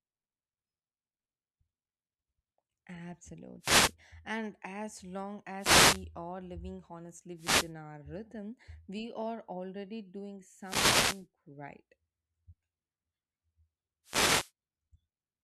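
Wireless microphone noise hits occur at 3.6–3.95, 5.56–6.06, 7.36–7.72, 10.6–11.26 and 14.04–14.52 s. As the FM radio link fades, receiver noise swells into a brief static swish over the speech, unlike a digital dropout, which cuts to silence.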